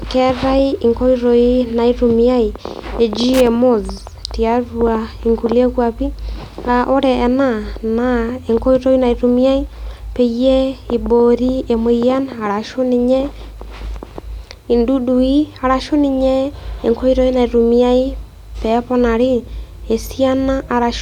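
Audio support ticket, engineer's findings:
Loose connector crackle, 3.34–3.47 s: brief irregular scratching burst over speech. Probable worn or dirty cable contact making and breaking, chopping signal.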